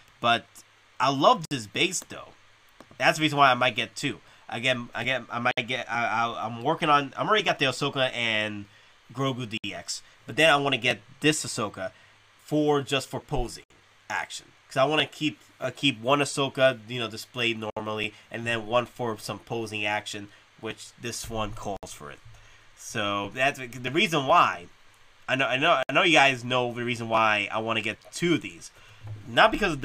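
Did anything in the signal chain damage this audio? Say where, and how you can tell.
Yes. The codec stage left a gap at a join of encoded pieces at 1.45, 5.51, 9.58, 13.64, 17.70, 21.77 and 25.83 s. Each is a 60 to 64 ms gap, four seconds apart, where untrimmed encoder delay and end padding stayed in. Unlike a network dropout, the sound resumes exactly where it stopped.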